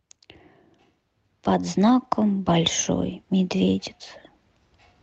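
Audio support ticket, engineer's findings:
Lost packet rebuilt from error correction, 1.83–2.05 s and 3.73–3.83 s: packet runs lost, decoder played low-bitrate in-band FEC copies instead. No gap, but about 120 ms and 60 ms of rougher, noisier speech. Opus path, 8 kHz band.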